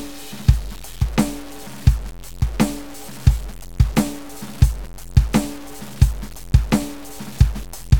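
From start to finish the music sounds grainy and gritty, with a harsh distortion that rises and falls with the sound. This is likely low bit depth without dither: truncation to about 6 bits, leaving error only roughly 20 dB below the music.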